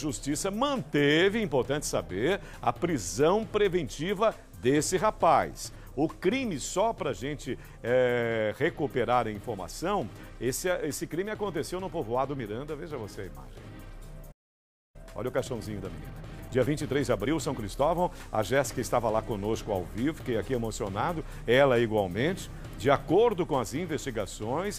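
The audio cuts to silence at 14.31 s and stays silent until 14.96 s, a gap of about 0.63 s. This is a playback stall, likely the player running short of buffered data or its output thread being blocked. From 14.96 s to 17.96 s there is time-compressed catch-up: the player trims its backlog by dropping and cross-fading short segments, so the audio runs about 1.15 times fast at unchanged pitch.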